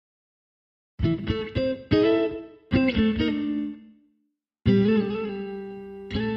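From 0.14 s to 6.36 s a run of clock slip clicks sits under the sound, roughly twenty per second and around a hundred and fifty in all, each a single sample dropped or repeated. The regular spacing likely comes from two unsynchronised clocks drifting apart by something near 500 ppm. It is heard as a soft, even rattle. A spectrogram shows evenly spaced thin vertical broadband lines, and the waveform shows tiny one-sample steps at each slip.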